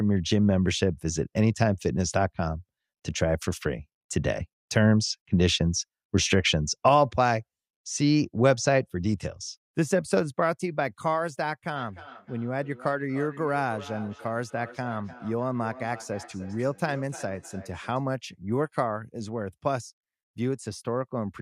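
A speech recording with feedback echo between two devices from 11.76 to 18.08 s. The speech returns at a steady interval of about a third of a second, peaking about 19 dB below the direct speech. A second device in the same room plays the call back into a microphone whose echo canceller handles only its own output. Unlike room reverberation, which smears sound continuously, each repeat arrives as a distinct copy after a fixed delay.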